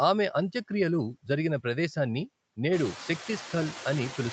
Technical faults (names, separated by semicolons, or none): noise suppressor artifacts